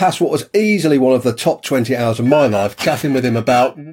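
From 2.26 s to the end, a rough, metallic edge settles over the sound. This is periodic clock jitter: the converter's clock is wobbling at around 2 kHz, spraying sidebands at that spacing around every component, harsher on higher frequencies.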